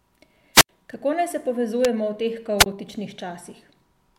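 At 0.54 to 0.69 s and again at 2.58 to 2.66 s, wireless microphone squelch dropouts occur. The radio signal fades, hiss swells, then the receiver mutes for about 81 ms and 20 ms. That rising static before the hole sets it apart from a clean digital packet gap.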